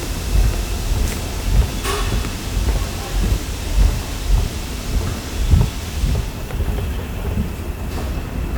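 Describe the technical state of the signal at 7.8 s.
At 7.8 s the signal is intact, with no audible technical fault at that point.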